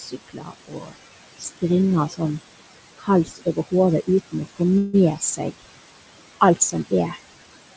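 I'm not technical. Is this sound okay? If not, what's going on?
No. Three things go wrong in this recording.

The first is noise suppressor artifacts, and it lasts the whole clip. A noise-cleaning step keeps judging which parts of the sound are steady background hiss and turns them down, many times a second. The background drops away in the pauses and comes back under the talking.

The second is speech cut by the noise suppressor. The same cleaning step sometimes mistakes quiet bits of the voice for noise and turns them down too. Soft sounds and word endings come out swallowed or faint. This happens from 0.0 to 0.95 s, 1.38 to 1.63 s, 2.09 to 2.2 s, 2.98 to 3.73 s, 4.07 to 4.61 s, 5.16 to 5.65 s, and 6.41 to 7.2 s. The opening stretch is hit hardest.

The third is a call audio freeze from 4.78 to 4.95 s. For about 0.16 seconds, the sound stalls and is filled with a short fading smear instead of new audio. 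Then it carries on exactly where it stopped. Nothing is lost, but the rest of the clip now runs that much later. The likely cause is a brief hold-up of the sound data on its way across the call, so the receiving side ran out of audio to play.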